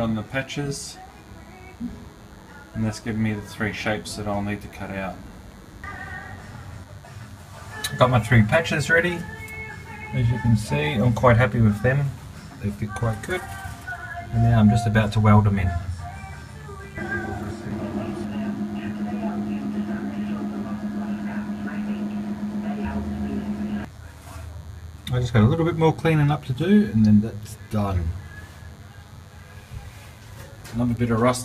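From start to finish, a DECT cordless phone buzz sits under the audio. A nearby DECT handset or base transmits a brief radio burst 100 times per second, and somewhere in the audio chain a junction rectifies that energy, turning each burst into a small pulse. The result is a constant, thin, edgy buzz with a 100 Hz fundamental and a dense stack of harmonics, sitting roughly 30 dB below the wanted signal and most exposed in quiet passages.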